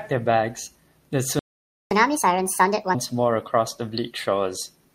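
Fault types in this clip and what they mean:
playback stall: The speech cuts to silence at 1.39 s and stays silent for about 0.52 s, until 1.91 s, then resumes. The likely cause is the player running short of buffered data or its output thread being blocked.
catch-up at higher speed: From 1.91 s to 2.95 s the speech runs at 1.5 times normal speed, with pitch raised by roughly seven semitones, as the player resamples its backlog to recover lost time before returning to normal rate.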